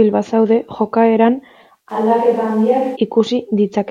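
At 1.91 s the speech abruptly goes roomy and hollow, loses bass, drops a few dB and picks up more background noise, then snaps back at 2.95 s. That's a switch to a distant microphone, likely because the close mic's signal dropped out.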